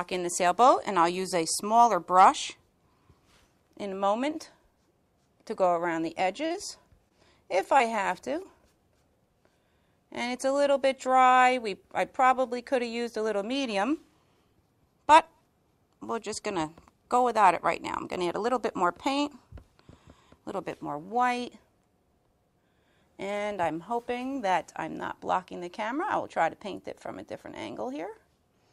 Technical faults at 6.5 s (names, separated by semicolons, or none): repeated packet loss (robotic sound)